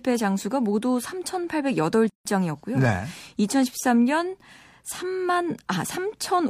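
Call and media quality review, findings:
Gap at a join of encoded pieces, 2.10–2.25 s: speech drops to silence for about 160 ms, then resumes mid-flow. Probable component: segment concatenation after encoding. Each piece kept its encoder start delay and last-frame padding, so the seam holds dead air.

Waveform: flat-line notch with edges softened by codec smearing. Spectrogram: full-band blank column across all frequencies, harmonics continuing unchanged either side.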